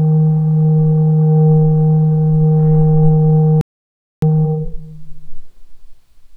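At 3.61 s the sound just cuts out mid-flow and stays silent until 4.22 s, a gap of about 0.61 s. That's a playback stall. The player most likely ran dry of buffered data or had its audio thread held up, so there was nothing to send to the output until it recovered. You hear it as a clean hole in the sound, not a fade.

Right after the gap, from 4.22 to 4.82 s, there's a time-compressed catch-up. The player works off the backlog from the stall by dropping small slices and cross-fading across the joins, so the sound runs at double speed for that stretch. Pitch stays where it should, but the material feels rushed, before settling back to normal pace.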